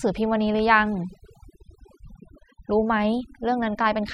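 A speech recording with overdone noise removal throughout. The background drops and breaks up into twinkling specks. Quiet voice detail is stripped away.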